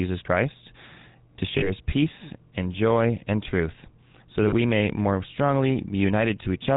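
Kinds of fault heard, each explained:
GSM full-rate codec: Throughout, the speech has the buzzy, gravelly roughness of the first GSM coder, which fits its 13 kbps full-rate mode. It models the vocal tract and drives it with coarsely spaced pulses, so the excitation carries only a thinned-out version of the real signal. Nothing above 4 kHz survives. Unlike plain band-limiting, which only dulls the sound, this adds a grainy buzz across every voiced stretch.
lost GSM frames: About 40 ms of audio goes missing twice, from 1.58 to 1.71 s just before "peace and joy and", and from 4.48 to 4.54 s between "and truth so that" and "may more". The decoder fills each gap by repeating the last good frame, so the sound hangs as a brief metallic ring. A dropout would leave silence, and a click would be a single sharp tick, but here the previous sound is held and repeated.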